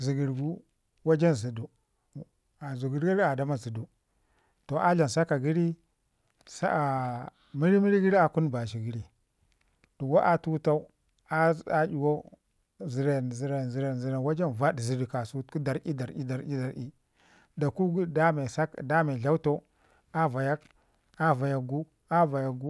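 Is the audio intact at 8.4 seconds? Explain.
Yes, at 8.4 seconds the audio is intact, with no dropout, click, distortion or other fault at that moment.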